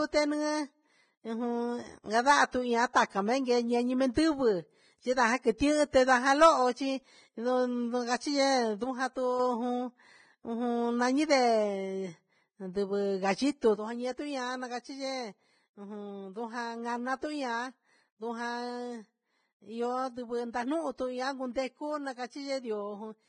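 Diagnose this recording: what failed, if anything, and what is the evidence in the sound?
Vorbis compression runs throughout: the speech sounds heavily damaged, hissy and grainy, and nothing is present above 9.7 kHz. At the codec stage, this likely reflects a low bitrate, roughly 20 kbps, where the encoder lowers its cut-off and quantises the remaining treble so coarsely that detail turns to noise.

Pre-echo occurs at 4.14 s (about 15 ms), 5.58 to 5.60 s and 5.91 to 5.93 s (about 24 ms each). A brief hiss leads each attack. This is also a codec-stage fault: quantisation noise is spread across a transform block, so the quiet moment before a late, sharp onset gets filled.

A sudden gain jump drops the level by about 5 dB from 8.84 to 9.40 s. From 13.76 s to the end, it drops by about 8 dB. Voice and background noise step down together with no ramp, which likely points to a digital gain change or bit shift applied instantly.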